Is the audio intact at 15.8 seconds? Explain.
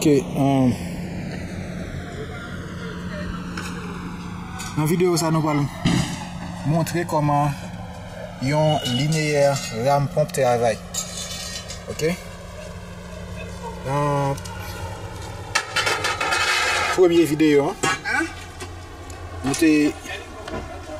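No. Throughout the clip, including 15.8 s, the channels are drifting apart: the two sides run on separate clocks roughly 150 ppm apart, so their offset grows to about 3 ms. Summed to mono, comb notches sweep slowly, heard as gradual flanging.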